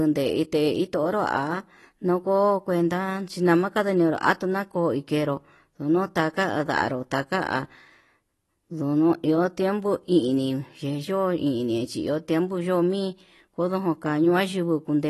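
From start to finish the speech sounds dull and plainly smeared, with a fizzy, warbling edge on sibilants and nothing above 12 kHz. The likely cause is AAC compression at a low rate, which fits roughly 32 kbps AAC-LC.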